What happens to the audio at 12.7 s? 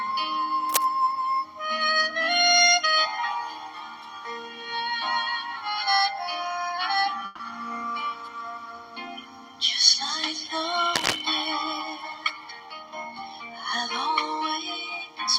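A jitter buffer speed-up runs from 12.03 to 13.27 s, covering the 12.7 s mark. The receiver's buffer had built up more delay than it targets, so it trimmed short pieces, each one or a few pitch periods long, over and over to catch up, discarding around 150 ms in total. The sound plays about 11% faster while its pitch stays unchanged, so that stretch comes across as hurried.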